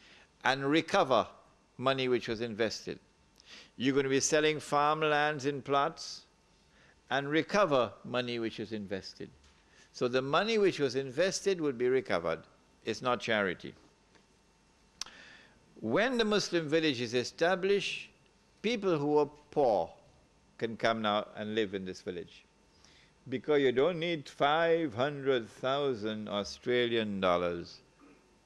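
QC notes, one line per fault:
Nothing stood out on listening.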